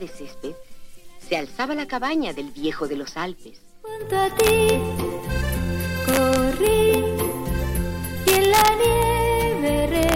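From 4.40 to 4.69 s, 6.09 to 6.94 s, 8.28 to 9.03 s and 10.03 to 10.14 s there is integer overflow: the gain pushed peaks about 2 dB past the largest integer (about 1 dB in the last stretch), and instead of being limited they wrapped to the opposite sign. Each overshooting peak becomes a crack, sharper than clipping. On the waveform those peaks jump across the full range. The spectrogram shows thin vertical broadband streaks at each crack.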